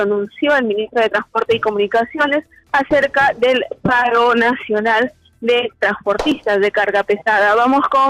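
At 3.02 s and 6.32 s, a block of digital silence about 1.3 ms long drops the sound out, consistent with a 64-sample block. Each abrupt cut gives a tick.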